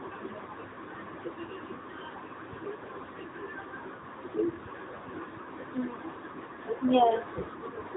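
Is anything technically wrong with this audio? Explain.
Yes. The speech has passed through an AMR narrowband mobile codec. The effect runs through the whole clip. Nothing is present above about 3.8 kHz, so the sound is thin and boxy, like a phone call. This codec samples at 8 kHz and rebuilds speech from a vocal-tract model fed by a few pulses per 5 ms subframe. The codec damage is plainly audible as a buzzy, synthetic edge. The sound points to a mid-range mode of roughly 10 kbps.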